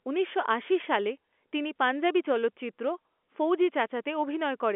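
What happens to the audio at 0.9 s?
Nothing goes wrong at 0.9 s: the speech carries on intact through that moment, heard through the narrow band of G.711 telephone coding with nothing above about 3.7 kHz.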